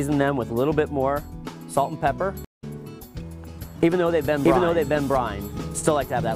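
A stream reconnect hits at 2.45 to 2.64 s. The connection dropped, the player went silent for about 178 ms, then reconnected and started a new decoder partway through the stream. The audio fades back in at a later point, roughly 150 ms further on, so that stretch of the sound is simply missing rather than delayed.

A doubled audio track runs from 4.07 s to the end of the clip. A second full-band copy of the same audio follows around 0.7 s behind and is about as loud as the original. It has no decay or room colour, which sets it apart from an echo, and it starts abruptly. The likely cause is the sound being picked up a second time through a slower path, or an edit leaving two copies out of step.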